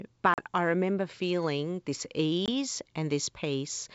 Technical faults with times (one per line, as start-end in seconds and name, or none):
0.34-0.40 packet loss on an ADPCM call
2.46-2.49 packet loss on an ADPCM call